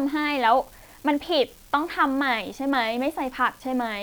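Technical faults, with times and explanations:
Throughout, unreliable data bit: one marginal bit flips at random, adding identical spikes of about -36 dBFS, heard as a steady crackle that continues through pauses in the speech.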